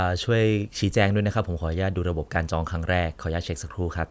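No audible faults are present anywhere in the speech.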